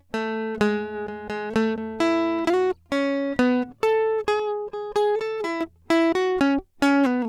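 From 4.40 to 5.61 s, the music turns hollow and phasey. This is channel delay causing comb filtering. One channel arrives around 5 ms late, and the mono sum cancels at evenly spaced frequencies. The first notch sits near 100 Hz.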